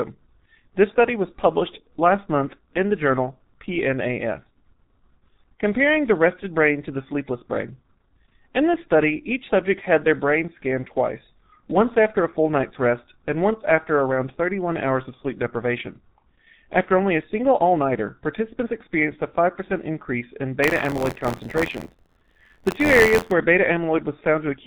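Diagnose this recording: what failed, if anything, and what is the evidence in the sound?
Muffled, hoarse speech throughout, with smeared consonants and nothing above 4 kHz. The damage is heavy and points to the codec stage: G.723.1 coding, consistent with about 6.3 kbit/s, where slow 30 ms frame updates blur the transients and strip the top band.

From 20.62 to 23.32 s a robotic 86.1 Hz buzz rides on the speech. This is buffer tearing at the driver/buffer stage, which fits a 512-sample buffer. The writer and reader cross each period, so a small slice of every buffer replays audio from about 40 ms earlier, with hard joins.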